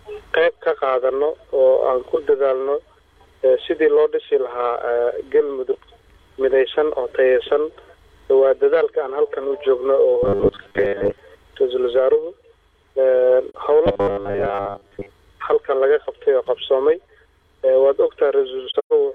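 The audio twice shows what is most likely robotic sound from repeated short buffers: new audio apparently arrived too slowly, so playback kept looping a 10 ms slice in place of the missing material. From 10.23 to 11.18 s about half the sound is replaced this way, and from 13.86 to 15.09 s most of it is, imposing a rigid, metallic 100 Hz buzz. AAC frame loss with muting also occurs: the decoder zeroed the missing frames, and the overlapping windows fade the audio out and back in, giving soft-edged holes. The first, at 13.49 s, is a 43 ms gap, which fits a single lost frame. From 18.70 to 18.93 s, about 171 ms drops out in pieces spread over roughly a quarter of a second, the longest single hole lasting about 150 ms.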